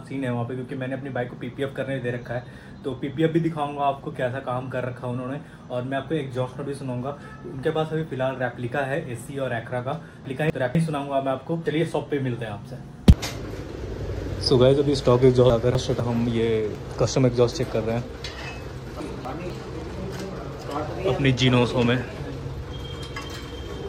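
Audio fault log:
10.25–10.75 s, 15.5–16.0 s and 19.0–19.5 s: chunks out of order. In each half-second span, two 250 ms blocks of audio play in swapped order, so the later block comes first and the one that should precede it arrives one chunk late. No audio is lost. The reversed sequence briefly jumbles the sound, and there are three abrupt joins where the blocks meet in each span.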